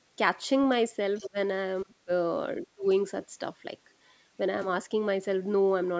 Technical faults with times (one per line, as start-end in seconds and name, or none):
1.16-1.27 other side's voice leaking through
1.24-1.38 speech suppressed in double talk
1.84-2.10 speech suppressed in double talk
2.62-2.86 speech suppressed in double talk
2.84-2.88 other side's voice leaking through